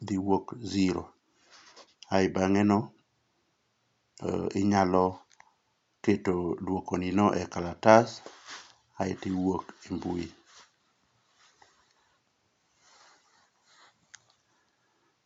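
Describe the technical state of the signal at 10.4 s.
The audio is intact at 10.4 s, with the speech carried cleanly and only faint room noise sitting about 51 dB below it.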